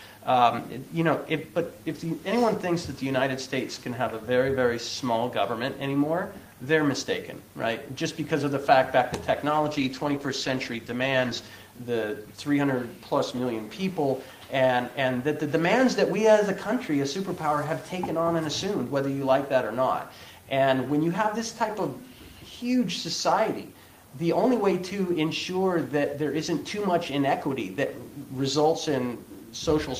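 From 9.53 to 11.55 s, a call bitrate drop coarsens the coding, sounding rough and muffled, which fits 32 falling to 14 kbps; the spectrogram's upper band vanishes.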